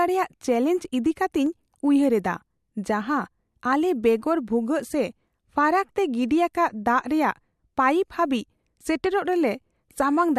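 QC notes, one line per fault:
1.46 s and 9.06 s, dropped samples: a single sharp click at each time, most likely from a fraction of a millisecond of samples going missing so the waveform jumps straight to a later value. Each shows as a thin vertical line across the spectrogram and a step in the waveform.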